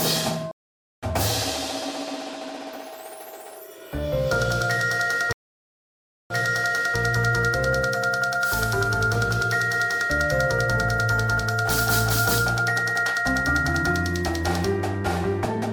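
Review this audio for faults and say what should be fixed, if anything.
Two stream reconnects here. At 0.51 to 1.05 s the audio drops out for 512 ms and picks back up roughly a third of a second further on, so a bit is simply skipped. At 5.33 to 6.97 s there's a 975 ms gap, then it restarts 670 ms earlier, replaying material you've just heard. In both cases the connection died, the player reconnected and spun up a fresh decoder mid-stream. A larger client buffer plus resume-by-offset on reconnect would hide both.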